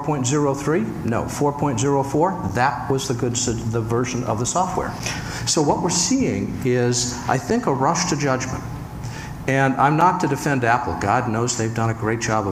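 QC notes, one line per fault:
2.49, 5.00, 7.50 and 10.01 s: gap between chunks. Each join between 2.5 s chunks adds 6.5 ms of silence, so the sound breaks into short, hard-edged holes at a steady rhythm.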